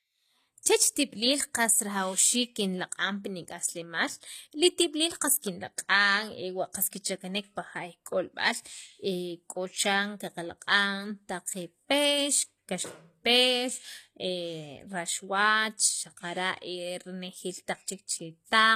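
From start to finish, the speech carries plainly audible codec damage, most likely from HE-AAC compression at a low bitrate, which fits about 24 kbps. The treble is rebuilt from copied lower bands rather than coded directly, so s sounds come out gritty and lispy, with a metallic sheen. On a spectrogram, the upper region shows smeared, repeated patterns whose harmonics fail to line up with those below, and nothing appears above 14.9 kHz.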